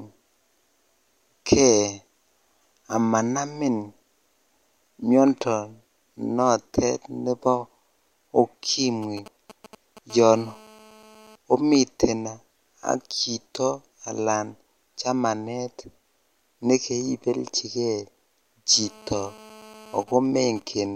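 At 9.03 s a nearby 2G phone starts chattering in with GSM signalling bursts, running to 9.99 s. The phone is only sending short clumps of radio pulses, the kind it fires off before a call or text lands. Something in the audio chain rectifies them, so you hear a galloping dit-dit-dit of ticks and brief buzzes at a 217 Hz repetition rate, sitting roughly 20 dB under the speech.

Right after, from 10.10 to 11.36 s, it settles into a proper GSM phone buzz. That's the phone in a call, transmitting bursts 217 times a second, with the circuit again demodulating the pulses into audio. You get a hard, raspy 217 Hz buzz loaded with harmonics, about 25 dB down and with no connection to what's being said. It comes back from 18.72 to 20.03 s at about 24 dB below the speech.

Then from 20.08 to 20.86 s it drops back to signalling bursts, this time because the phone's user has gone quiet mid-call. This time it's even ticks with a longer 217 Hz buzz twice a second, roughly 25 dB down.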